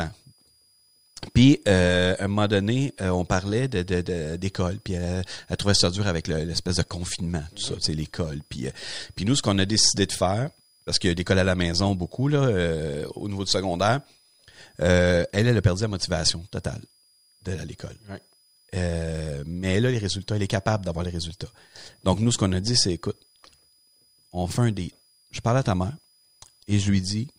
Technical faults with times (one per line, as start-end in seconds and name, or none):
0.00-27.38 switching supply whistle